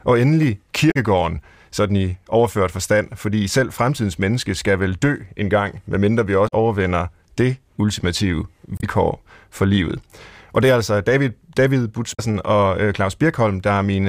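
Damaged data in a compressed stream breaks the speech at 0.88–0.96 s, 6.45–6.53 s (between "en gang medmindre vi" and "overvinder det ultimative"), 8.77–8.84 s (after "overvinder det ultimative") and 12.11–12.20 s. Each time, corrupted frames were misdecoded or dropped while the decoder resynchronised.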